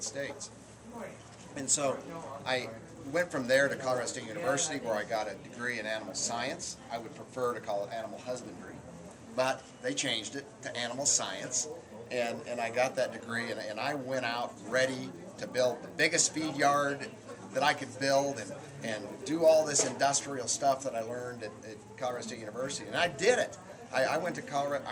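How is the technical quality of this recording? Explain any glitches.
The recording has one continuous fault, a resampler restarted on every block, running from start to end. Each 20 ms block appears to have been converted separately, which fits a 24 kHz to 48 kHz conversion, so at every block edge the converter lacked the true neighbouring samples and left a small discontinuity. At 50 repeats per second, these errors merge into a steady 50 Hz buzz riding on the sound, present only while signal is playing.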